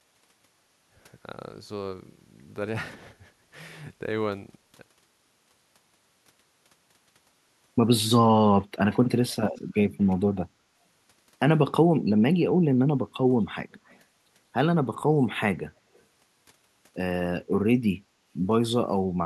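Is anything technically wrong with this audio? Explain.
Yes. There's an echo leak: faint, delayed copies of the speech slip back into the clip in short scraps, at 8.92–8.99 s, 9.30–9.36 s, 9.53–9.61 s, 13.72–14.00 s and 15.94–16.01 s. Each trails the original by 185 ms and sits well under it, roughly 25 to 40 dB down, so you hear a faint ghost rather than a clear repeat. The likely cause is a speakerphone on the far end whose echo canceller let bits of its own loudspeaker output back into the mic.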